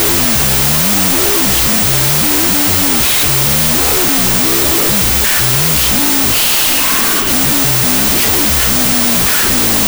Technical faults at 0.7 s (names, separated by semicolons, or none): wrong sample width